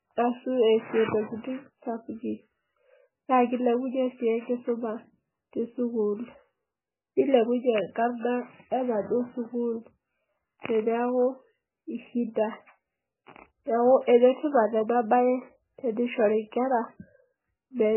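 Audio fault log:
Throughout, MP3 compression, likely at a very low bitrate of around 9 kbps: the speech is heavily mangled and has nothing above 3 kHz, because a starved encoder chops off the treble at a fixed point to save bits. What's left is coded so thinly that weak frequency components drop in and out from one frame to the next, giving the watery, swirling texture and dull, smeared consonants.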